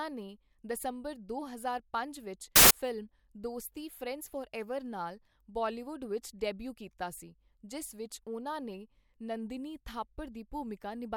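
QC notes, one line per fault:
2.56–2.71 s, samples built from the wrong bytes: a 0.15 s burst of loud, harsh broadband noise in the speech, as misassembled bytes make the fast-changing low bits the large part of each value. Unlike clipping, it's broadband hiss, not distorted speech.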